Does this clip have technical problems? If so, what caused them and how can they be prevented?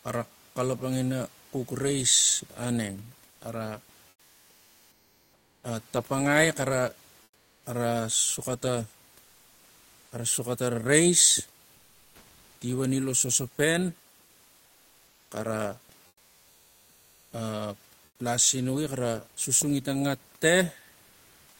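Yes, comfort noise in place of the background. In the pauses at 3.31–3.41, 4.09–5.63, 7.23–7.63, 11.75–12.61 (after "xara suxa ta rais"), 14.25–15.31, 16.07–17.31 and 18.05–18.19 s, the real room noise turns flat and featureless, about 1 to 6 dB quieter. The likely cause is Opus DTX switching off transmission in silences and filling in synthetic noise. Disable DTX on the sender to prevent it.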